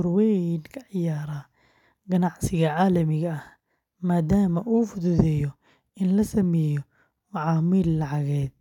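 No technical faults can be heard anywhere in the speech recording, with the signal staying continuous and steady throughout.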